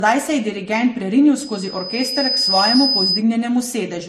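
Transcoding between lossy codecs, throughout: the speech has nothing above 15.1 kHz and carries layered, mismatched compression smearing. This likely comes from a chain of low-bitrate MP3 followed by Vorbis, each encoder working on the previous one's artefacts while the lowest cut-off survives.

Loudspeaker feedback squeal, 1.39 to 3.24 s, right after "se je dirigent prerinil": a 5 kHz tone swells over about a second to roughly 5 dB above the speech. A microphone hearing its own loudspeaker let the loop gain at that frequency exceed one, so it grew by itself.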